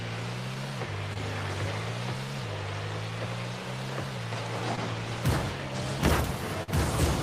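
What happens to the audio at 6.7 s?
From 6.63 to 6.72 s there is short concealed packet loss: about 40 ms of audio never arrived in time, and the decoder filled the gap by extending the preceding sound, then blended back. It's heard as a brief smear or wobble. A spectrogram shows flattened, copied spectral texture there; the waveform shows the continued sound fading into the real signal.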